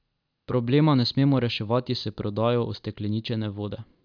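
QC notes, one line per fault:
No faults detected.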